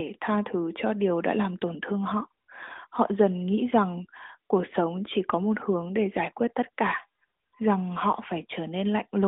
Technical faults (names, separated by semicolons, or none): none